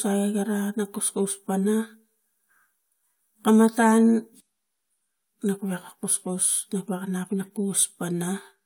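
No technical faults can be heard anywhere in the speech.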